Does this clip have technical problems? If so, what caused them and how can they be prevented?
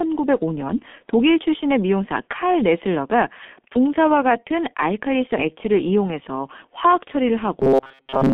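Yes. Throughout the clip the speech sounds muffled and hoarse, with consonants smeared together and nothing audible above about 3.5 kHz, the signature of heavy G.723.1 codec damage. At 6.3 kbit/s the codec packs each 30 ms frame into a handful of bits and rebuilds the voice from a coarse, slowly updated model, so fine detail and high frequencies are lost. Using a wideband codec at a higher bitrate would prevent this.

From 7.60 s to the end at 8.33 s, the voice becomes a rigid, metallic buzz pitched at 134 Hz that still roughly tracks the speech. This is robotic sound from repeated short buffers. The likely cause is that audio arrived too seldom, so playback kept looping the last fragment, about 7.5 ms long to match that buzz, while most of the real audio in that stretch was skipped. Larger playback buffers and a more reliable audio thread or network path would prevent it.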